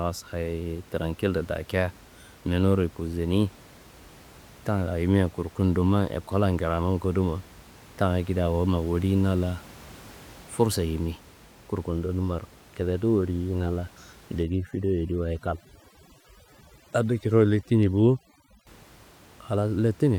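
From about 14.43 s to 18.67 s there's overdone noise removal. The denoiser is set far too aggressive: any frequency band that sits close to its idea of the noise floor gets pushed way down or gated off entirely, and the softer parts of the speech get caught in it. So the room noise, normally about 25 dB under the speech, drops and breaks up into little twinkly specks.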